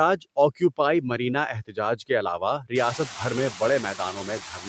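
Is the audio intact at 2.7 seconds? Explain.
No. From 2.59 to 2.72 s the speech is cut by the noise suppressor, which mistook part of the speech for background noise and turned it down with the noise, by about 15 dB at its deepest. That stretch sounds swallowed and faint.

Throughout the clip, noise suppressor artifacts are present too. The suppressor pulls steady noise down by about 18 dB frame by frame, so the leftover background sinks in gaps and swells under speech.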